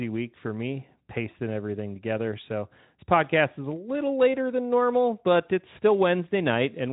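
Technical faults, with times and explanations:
No faults can be heard in the speech, which passes through a Speex codec at a setting that sounds consistent with about 15 kbps.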